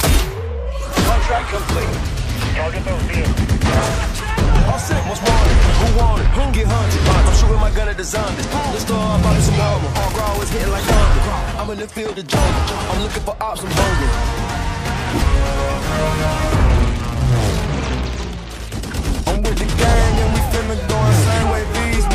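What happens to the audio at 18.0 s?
Nothing goes wrong at 18.0 s; the audio carries on intact through that moment.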